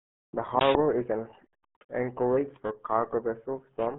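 Low-bitrate coding by the RealAudio 14.4 codec, consistent with an 8 kbit/s dial-up stream, degrades this speech clip throughout. Content sits in a narrow 150 Hz to 3.5 kHz band with nothing above 3.9 kHz, so the speech sounds heavily muffled and gargly.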